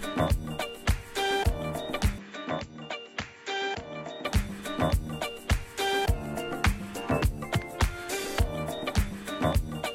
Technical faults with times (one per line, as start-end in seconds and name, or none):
2.18-4.25 input switched to a poorer device